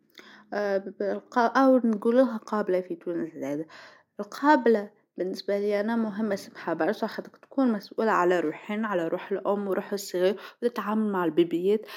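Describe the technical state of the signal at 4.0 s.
At 4.0 s the speech signal is intact, with no dropout, distortion, glitch or other technical fault audible at that moment.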